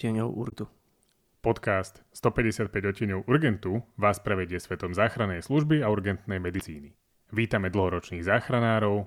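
Speech with damaged data in a compressed stream at 0.49–0.53 s and 6.57–6.61 s: corrupted frames make the decoder lose sync, producing brief 40 ms glitches.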